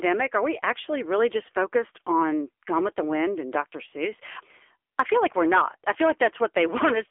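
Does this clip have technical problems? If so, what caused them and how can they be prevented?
Yes. AMR narrowband mobile codec damage runs throughout: 8 kHz phone coding leaves nothing above 3.5 kHz and a plainly audible synthetic buzz, which fits a low-rate mode near 8 kbps. To prevent it, record locally or use a wideband connection rather than a narrowband mobile call.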